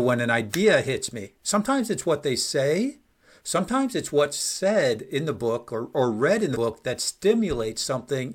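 At 1.23 s, just after "an idea hits", compressed frames are skipped: about one frame, around 50 ms, is missing, and the speech jumps ahead before "sometimes it's what they". At 6.53 s, after "or or read in", roughly two frames vanish, about 100 ms. Each jump is a multiple of the 46.4 ms frame. A sample-level dropout would instead leave a hard click or a silent gap.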